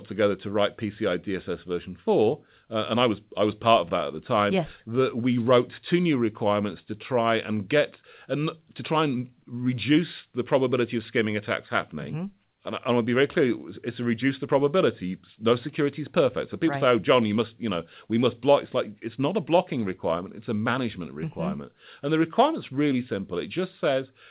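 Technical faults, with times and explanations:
No technical faults can be heard in the speech. It has come over a WebRTC call path, and nothing reaches above 4 kHz, which fits a G.711 mu-law codec at 64 kbps.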